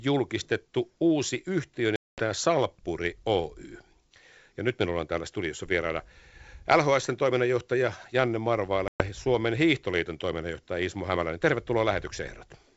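From 1.96 to 2.22 s, and again from 8.88 to 9.02 s, there is packet loss on an ADPCM call. About 220 ms and then 120 ms of speech drop out as hard-edged silence. The first gap is roughly ten packets long; the second is several. The decoder's predictor and step size fall out of step with the sender's, so each return comes in slightly distorted before it settles. On a waveform, each gap shows as a flat line with abrupt edges. On a spectrogram, each shows as a full-band blank bordered by vertical streaks.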